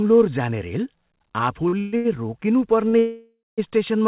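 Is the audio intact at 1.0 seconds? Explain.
Yes, the speech is intact at 1.0 seconds, with no fault there beyond the call path's normal narrowband sound, which has nothing above 4 kHz.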